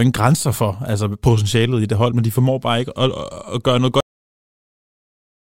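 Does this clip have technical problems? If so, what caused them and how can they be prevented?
Yes. The speech has a cut-off end at 4.00 s, just after "at at gøre noget". It stops mid-sound and falls straight to digital silence with no decay, because the final buffers were never written or played. To prevent it, flush and drain all pending buffers before closing the stream or file.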